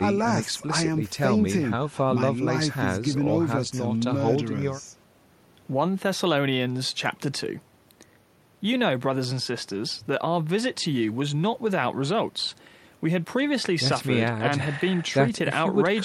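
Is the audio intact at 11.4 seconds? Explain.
Yes, the speech at 11.4 seconds plays through intact, with no dropout, click, distortion or other fault at that moment.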